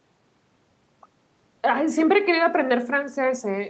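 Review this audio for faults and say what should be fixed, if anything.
Nothing needs fixing: the speech shows no faults, and its top end stops at 8 kHz, as expected from the call microphone processing and the wideband call codec on the WebRTC call path.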